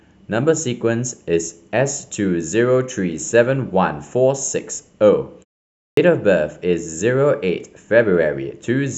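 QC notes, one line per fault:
5.70–5.97 s, clipped start after a pause: after a 0.34 s gap the output device needed time to wake, so 273 ms of onset was swallowed and speech bursts in abruptly. The waveform jumps from flat silence to full amplitude; the spectrogram lacks the opening onset energy.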